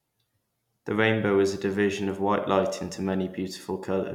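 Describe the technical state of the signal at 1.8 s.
At 1.8 s the speech signal is intact, with no audible technical fault at that moment.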